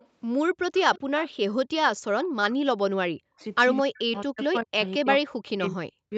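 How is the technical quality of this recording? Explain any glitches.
The recording has two call-processing faults: brief echo leaks and repeated gating of the talker during double talk. The audio is band-limited to 8 kHz, in line with a wideband Opus call.

Echo leak appears at 0.00, 0.74–1.00, 1.20–1.30, 2.24–2.28 and 4.16–4.21 s. A delayed copy of the speech, trailing by 217 ms and sitting roughly 15 to 35 dB under the direct voice, comes through. The likely cause is an echo canceller that missed part of the loudspeaker pickup.

Speech suppressed in double talk occurs at 2.34–3.40, 3.81–4.81 and 4.99–6.12 s. The talker's level collapses by up to about 40 dB. The canceller, likely unable to tell local speech from far-end echo while both sides spoke, pulled down everything together.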